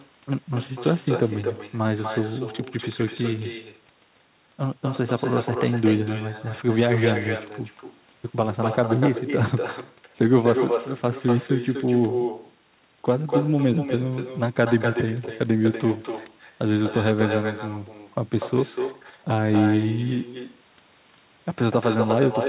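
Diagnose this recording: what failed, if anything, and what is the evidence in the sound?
Echo with no canceller, present throughout. Every phrase of speech is followed roughly a third of a second later by a thinner copy only about 7 dB down. That means the far end is playing the call over a loudspeaker, its microphone is picking it back up, and no acoustic echo cancellation in the call processing removes it. The repeat is band-limited like the rest of the audio, with nothing above 4 kHz, which fits narrowband G.711 mu-law.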